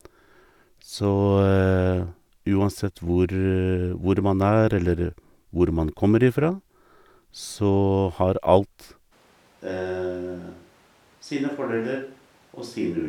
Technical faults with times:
9.13-13.09 switch to a distant microphone

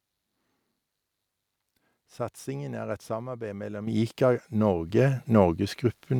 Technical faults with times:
3.87 microphone volume stepped up
4.89 microphone volume stepped up

